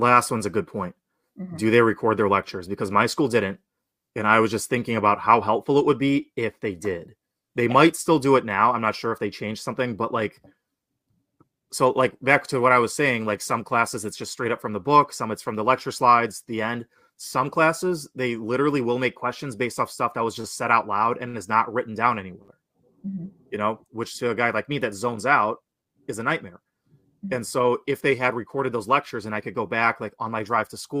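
Three short stalls from late packets land at 20.41, 21.28 and 22.42 s. The buffer ran dry, so the sound gets held 27, 58 and 61 ms with a faint buzz or dip. From 30.18 s to the end, a jitter buffer speed-up trims pitch-period slivers to shed around 50 ms of backlog, running 104% fast, same pitch.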